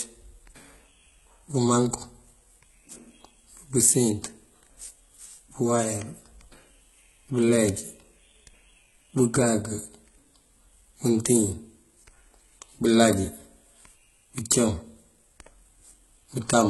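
It's speech, and the whole clip has a gritty, metallic top end, lispy s sounds and nothing above 11.8 kHz, likely from heavy HE-AAC compression with treble rebuilt from lower bands.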